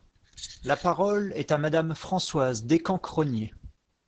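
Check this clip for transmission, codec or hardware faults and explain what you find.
One codec fault runs through the whole speech clip: heavy Opus voice compression. The highs stop around 8 kHz, and the excitation is coded coarsely by the SILK linear-prediction coder, leaving the speech muffled, hoarse and a bit robotic. It sounds like a very low rate, around 10 kbps.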